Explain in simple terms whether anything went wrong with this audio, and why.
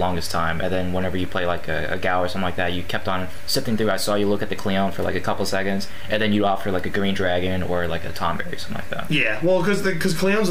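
Nothing went wrong here: the signal stays steady and intact all the way through, with no technical faults to point to at any moment.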